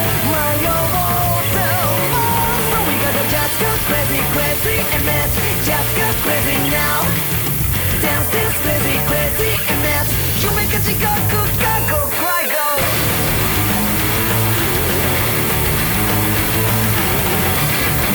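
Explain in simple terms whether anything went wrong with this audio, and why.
A thin, steady hiss runs from start to end, nearly as loud as the sound. It is low bit depth with noise shaping: three bits, with the errors pushed into the treble.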